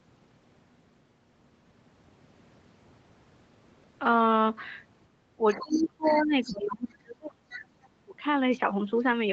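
From 5.37 to 7.67 s the speech sinks in level and thins out, in a stretch of speech suppressed in double talk. The likely cause is an echo canceller that could not tell the near talker from loudspeaker echo while both sides spoke, so it attenuated everything, by up to about 30 dB and over roughly two seconds in total. On a waveform the envelope collapses into ragged, narrowed segments. A spectrogram shows the upper harmonics fading first, with gaps across the band.

In and just after that dip, a second voice of the other side leaking through appears in short scraps: 5.50–5.89 s and 6.05–6.19 s at about 15 dB below the speech, 6.43–6.56 s and 7.51–7.58 s at about 20 dB below, and a faint trace at 7.83–7.88 s at about 35 dB below. This is likely residual echo that the canceller failed to remove. In a spectrogram it shows as weak, separate harmonic patches filling the holes.

A shorter suppression follows at 8.04–8.22 s. 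The level drops by about 20 dB over roughly 150 ms, leaving a brief notch in the waveform. All of this sits under the call path's 8 kHz ceiling, which is visible as an empty band above that line.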